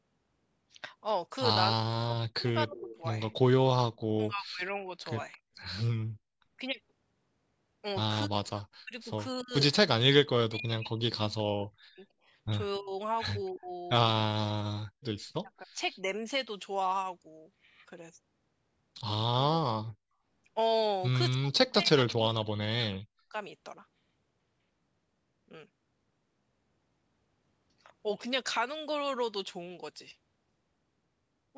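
Speech recorded through a call's microphone processing, with nothing above 8 kHz. It shows two faults. In speech suppressed in double talk, the echo canceller likely could not tell the talker from loudspeaker echo while both sides spoke, so it turned everything down. The voice sinks by as much as about 40 dB or breaks into pieces between 1.74 and 4.91 s, 8.26 and 13.71 s, 15.41 and 16.07 s (shallower there), and 21.34 and 23.34 s. In the echo leaks, far-end echo likely slipped past cancellation and was sent back. A faint copy delayed by 279 ms is heard from 2.78 to 2.98 s, about 20 dB below the speech, and from 5.32 to 5.38 s, about 30 dB below.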